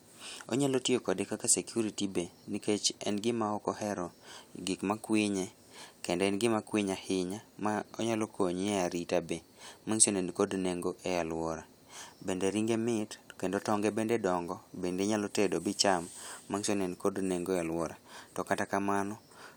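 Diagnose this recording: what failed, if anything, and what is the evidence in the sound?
Nothing failed; no fault is audible in this recording.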